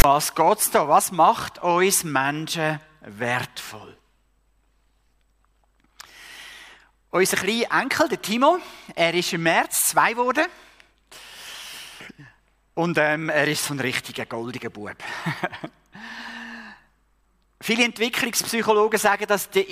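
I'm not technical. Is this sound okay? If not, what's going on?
No. From 0.00 to 0.04 s there is a case of file tags played as audio: text tags read as sound give a brief harsh rasp, then their zero padding gives silence.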